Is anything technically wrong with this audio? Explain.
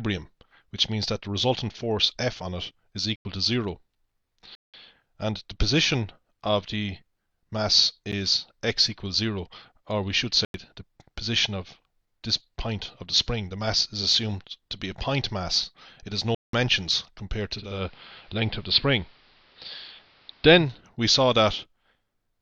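Yes, there are two kinds of fault.

Block of digital silence: the output was handed runs of zeros, either because the buffer wasn't filled in time or because a calculation produced invalid numbers. The sound drops out and returns with no fade at 3.16 s (93 ms), 4.55 s (186 ms), 8.12 s, 10.45 s (93 ms) and 16.35 s (186 ms). The 93 and 186 ms holes fit 4096- and 8192-sample blocks. The 8.12 s gap lasts only about 10 ms, so it comes across as a tick or dip rather than a hole.

Digital radio blending to analogue: from 17.52 s to 20.87 s, a hybrid receiver lost its digital stream and cross-faded over about 332 ms to the station's AM broadcast, then back again. During that stretch, hiss sits roughly 30 dB below the programme and the level shifts by about 1 dB. Both the hiss and the level change come and go with the two blends.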